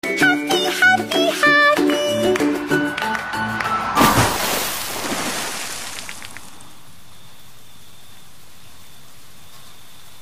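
No technical faults can be heard anywhere in the recording.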